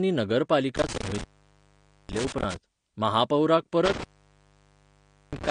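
Throughout, the speech is dull and plainly smeared, with nothing above 10 kHz. This is likely AAC compression, consistent with AAC-LC at around 32 kbps. From 0.76 to 2.56 s and again from 3.85 to 5.51 s, an intermittent contact opens the line. The sound drops out with crackle at the edges for about 0.86 s and 1.29 s respectively.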